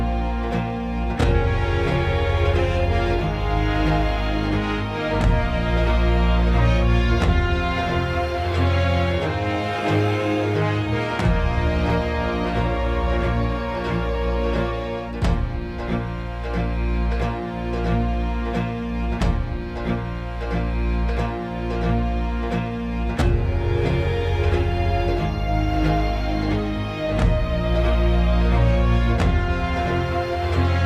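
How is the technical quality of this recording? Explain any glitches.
No technical glitches can be heard in this recording. There is nothing here that needs explaining.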